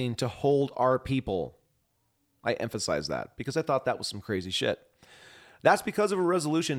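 No technical faults can be heard anywhere in the recording. The speech comes through as one continuous signal, with nothing in the audio chain drawing attention to itself.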